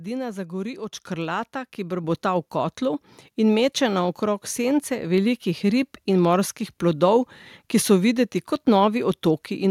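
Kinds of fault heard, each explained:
Microphone volume stepped up: the capture gain is raised in one step, as when call software judges the microphone too quiet, so speech and background noise get louder together. It happens at 1.02 s, right after "zagori od", by about 5 dB, and at 2.04 s, just before "v kotlu in meče", by about 4 dB. The waveform envelope widens abruptly at each point, and a spectrogram brightens evenly at all frequencies, including the noise floor.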